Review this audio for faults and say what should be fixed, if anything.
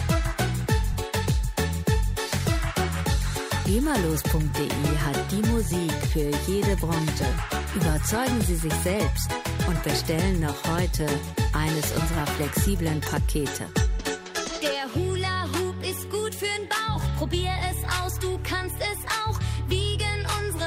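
Lost LE Audio frames at 0.93 s and 5.70 s: each 10 ms loss fits one dropped LC3 frame. It is concealed with a brief noisy smear, not the silent gap of a plain dropout. Strengthen the Bluetooth link, with shorter range, less 2.4 GHz interference and more retransmission headroom, so frames arrive intact.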